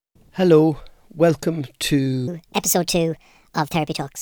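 Speech, with one section at the wrong speed running from 2.28 s to the end. From that point the voice suddenly turns higher and more hurried. It plays at 1.42 times its proper rate. Pitch rises with it, by roughly seven semitones. Speed and pitch shift together, so this is not a pitch effect alone. The likely cause is that this part was played or resampled against the wrong clock.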